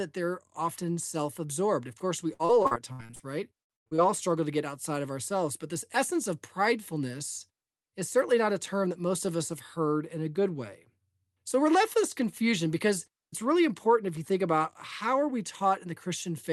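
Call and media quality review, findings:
Repeated packet loss (robotic sound), 2.33–3.21 s and 3.61–4.00 s: choppy speech with pieces missing. The jitter buffer conceals lost packets by extending the last audio on the Opus call path. Second burst is worse: gaps up to 110 ms, over half concealed.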